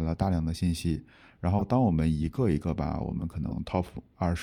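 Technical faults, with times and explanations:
1.58–1.62 s and 3.49–3.52 s, corrupt frame decoded: damaged bits in a few compressed frames were decoded as if valid, so misread gains and codes put energy at the wrong frequencies, giving brief bursts of about 38 ms and 30 ms, the first noticeably louder.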